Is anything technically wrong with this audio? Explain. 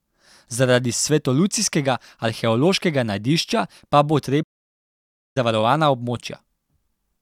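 Yes, there is a playback stall in this speech from 4.42 s to 5.37 s, lasting about 0.93 s. The likely cause is that the player ran short of incoming data, or its audio thread was held up, so it had nothing to send to the output until it recovered. To the listener, the speech cuts off abruptly mid-flow and the output falls completely silent for nearly a second before the sound comes back.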